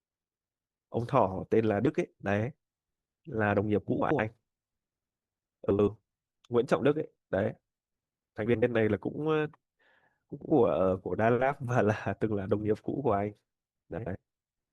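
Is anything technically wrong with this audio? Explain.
Yes. Frames out of order occur at 4.01–4.19, 5.70–5.89, 8.46–8.63, 10.33–10.51 and 13.98–14.16 s. In each stretch, two adjacent blocks of about 85 ms, which fits runs of four frames, play in swapped order. This produces a garbled flutter. Unlike a dropout or skip, no time goes missing and nothing repeats.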